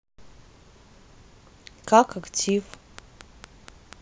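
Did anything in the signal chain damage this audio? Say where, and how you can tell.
Yes. From 2.49 s to 3.94 s a train of clicks ticks over the speech at a steady rate of about 4.2 per second, roughly seven near-identical pops in all, each standing about 10 dB above the signal, so they stand out in pauses as well. The even spacing and unchanging shape point away from the talker and toward a repeating electrical pulse, likely interference picked up in the analogue wiring or a faulty connection or power supply.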